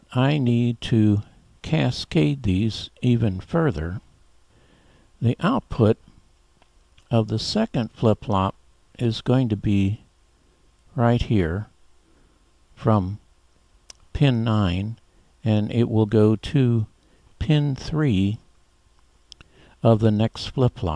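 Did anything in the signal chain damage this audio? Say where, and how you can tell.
No, no damage anywhere.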